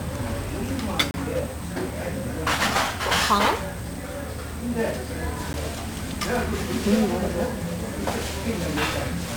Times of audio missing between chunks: none

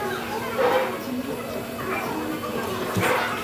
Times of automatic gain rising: none

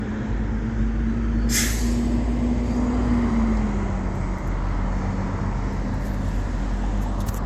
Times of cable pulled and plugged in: none

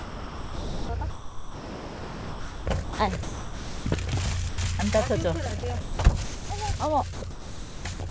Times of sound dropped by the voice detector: 4.49-4.58, 6.77-6.80

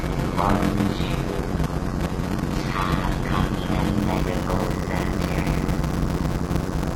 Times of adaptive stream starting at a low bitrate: 0.00-4.00

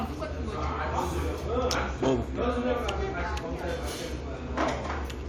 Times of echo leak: none

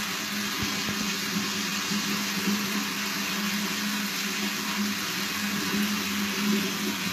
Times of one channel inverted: none

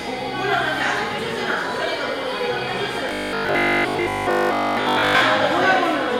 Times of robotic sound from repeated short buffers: 3.09-5.21

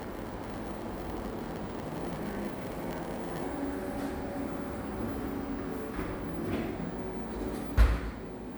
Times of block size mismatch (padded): 0.00-3.44

